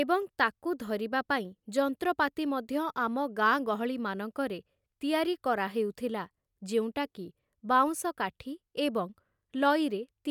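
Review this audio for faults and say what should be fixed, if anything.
Nothing here needs fixing, as the signal shows no technical faults anywhere in the recording.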